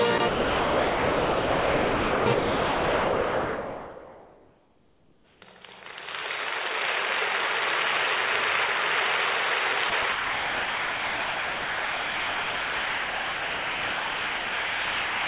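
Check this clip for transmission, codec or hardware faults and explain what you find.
Six stretches of sound dropped by the voice detector are audible. They fall at 0.18–0.20 s, 0.28–2.26 s, 2.34–5.42 s, 9.90–9.92 s, 10.02–10.04 s, and from 10.12 s to the end. The likely cause is the sender's detector treating the sound as background and halting transmission, so the receiver fills the gap with generated comfort noise. The sound gives way to flat noise, in brief 20 ms blinks near 0.2 s and 10 s and in long gaps of about 2 s, 3 s and 5 s. The call path's narrow band, with nothing above 4 kHz, fits G.711 at 64 kbps.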